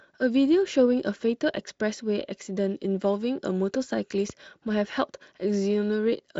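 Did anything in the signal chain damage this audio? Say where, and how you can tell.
Yes. A voltage step in the analogue wiring, likely a plug or switch, added one loud pop at 4.30–4.32 s, roughly 5 dB above the continuing speech.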